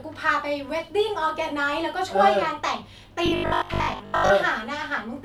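From 3.26 to 4.32 s, the likely cause is audio arriving too seldom, so the playback side fills the gaps by looping the last short buffer while the real speech in between is dropped. The result is robotic sound from repeated short buffers: for most of that second, the speech collapses into a stiff, metallic buzz at 50 Hz, which fits a 20 ms buffer repeating, and only loosely tracks the rhythm of the talking.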